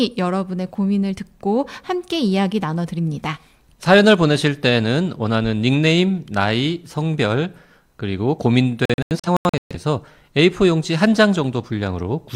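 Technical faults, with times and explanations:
8.85 to 9.76 s, digital broadcast dropout: the speech drops out in several short silent holes adding up to about 469 ms, spread across roughly 850 ms, the longest lasting 128 ms. The receiver muted whenever incoming frames failed or went missing, which points to around eleven lost frames, then resumed once clean frames arrived. Unlike analogue fading or interference, there is no hiss or noise burst, only clean mutes, and the missing audio is simply gone.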